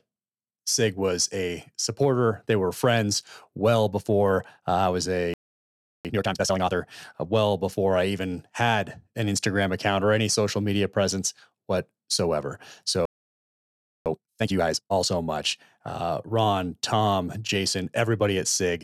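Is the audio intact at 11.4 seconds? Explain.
Yes, the speech runs through 11.4 seconds without any audible fault.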